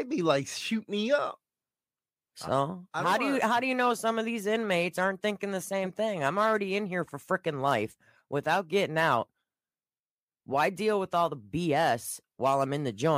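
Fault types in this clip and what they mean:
No faults are present.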